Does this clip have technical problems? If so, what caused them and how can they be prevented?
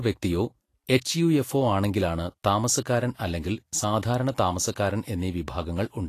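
Yes. Throughout, the speech sounds hissy and grainy with nothing above 14.2 kHz, likely Vorbis compression at a low bitrate around 35 kbps, which coarsely quantises treble. Encode at a higher quality setting.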